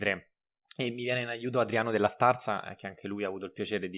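No faults are audible anywhere in this recording; nothing in the signal chain calls for attention.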